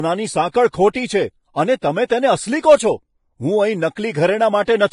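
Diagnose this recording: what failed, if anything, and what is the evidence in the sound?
The codec stage failed. The whole clip of speech is band-limited, with nothing above 10.5 kHz. The treble is hissy and grainy. Sibilants turn to rough noise, and tones sound coarse. The damage is heavy throughout. This is likely Vorbis compression at a low setting. The encoder dropped its cut-off and quantised the upper residue so coarsely that fine detail became noise of similar energy. The sound fits a bitrate near 30 kbps.

There is also pre-echo at 1.79 to 1.83 s, just after "છે અને". A short burst of hiss, about 34 ms long, comes before the next sharp attack. The onset itself sounds soft and smeared. The cause is again the codec. The attack fell late in a transform block. The quantisation noise, sized for the loud part, spread across the whole block and filled the quiet gap before it.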